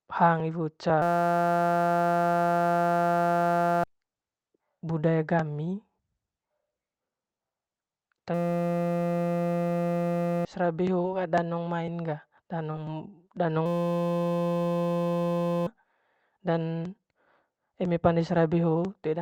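From 1.02 to 3.84 s, a system hang loop: the machine froze while the sound hardware kept replaying one 5.8 ms slice of its ring buffer, which fits a 256-sample buffer. The speech becomes a steady buzz at 172 Hz, and about three seconds of audio never arrive. The same hang recurs from 8.34 to 10.45 s, costing around two seconds.

At 11.01 to 11.06 s and again at 12.72 to 12.76 s, short concealed packet loss: 20 ms of speech missed the decoder, and the receiver extended the preceding sound to bridge the gap, leaving a brief smear.

A third system hang loop, from 13.66 to 15.67 s, brings back the 172 Hz buzz and swallows roughly two more seconds.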